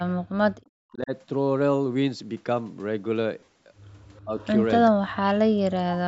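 Right at the start, from 0.2 to 1.12 s, the speech sinks by up to about 40 dB. That's speech suppressed in double talk, likely the echo canceller hearing both ends at once and ducking everything rather than sorting its own talker from the loudspeaker echo.

Between 3.39 and 3.58 s you get short smeary, noisy holes scattered over about 180 ms, the longest around 40 ms. That's lost LE Audio frames: the LC3 decoder patches gaps by reusing the last spectrum with scrambled phase, and the roughly 112 ms missing in total fits fifteen or so 7.5 ms frames.

At 4.15 to 4.21 s and again at 4.39 to 4.47 s there's a faint copy of the talker trailing by 387 ms, about 35 and 30 dB down. That's echo leak, likely the far-end canceller letting some of its loudspeaker pickup slip back down the line.

Sandwiched between those, from 4.24 to 4.37 s, the speech suppressed in double talk returns, dipping by about 25 dB. 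It comes back harder from 4.9 to 5.23 s, where the talker drops by up to about 40 dB while the other side is talking, likely the canceller clamping down again.

Finally, from 5.52 to 5.6 s the room tone briefly vanishes, falling about 40 dB before snapping back. That's background gated by the echo canceller: it slammed the mic down while the loudspeaker played and released it a moment later.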